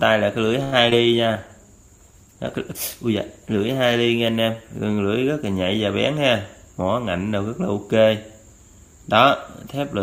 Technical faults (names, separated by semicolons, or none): short stall from a late packet; short concealed packet loss; call bitrate drop; jitter buffer speed-up